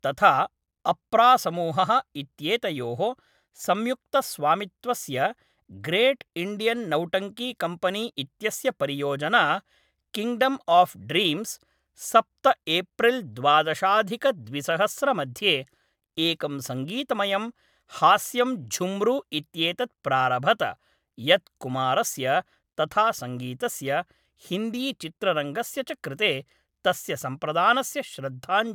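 No technical faults are audible.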